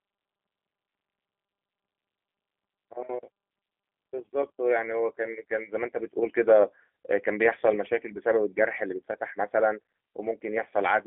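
Speech carrying G.729 codec damage throughout: band-limited to roughly 250 Hz to 3.4 kHz, with the rough, synthetic texture of an 8 kbit/s model-based speech coder.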